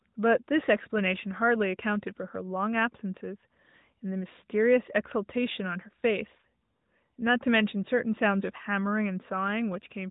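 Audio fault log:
Nothing stood out on listening, with the speech carried through the AMR narrowband mobile codec, which cuts everything above about 3.8 kHz.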